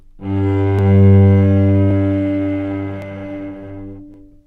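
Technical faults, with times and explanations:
0.79–4.14 s, clock drift buffer slips: about four evenly spaced clicks, one every 1.12 s, each a brief tick in the sound as a short block of samples, on the order of a few dozen, is dropped or repeated. The steady spacing points to two devices likely running on independent clocks that disagree by roughly 700 ppm, so the buffer between them gradually fills or drains until it slips, then starts over.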